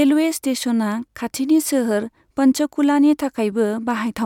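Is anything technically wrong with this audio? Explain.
No, nothing technically wrong is audible in this speech recording.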